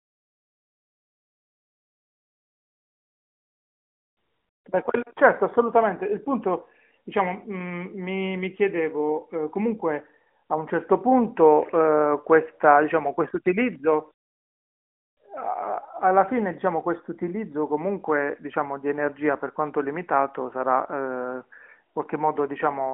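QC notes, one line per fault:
No faults logged; the speech comes over an AMR-NB mobile line at 12.2 kbps with the expected narrowband pass of about 200 Hz to 3.5 kHz.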